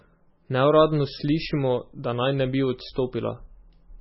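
Throughout, the speech has nothing above 5.6 kHz and carries a watery, swirling texture, with metallic chirps on s sounds and smeared consonant attacks. The likely cause is heavy MP3 compression at a very low bitrate, where the encoder cuts treble and zeroes weak frequency lines frame by frame.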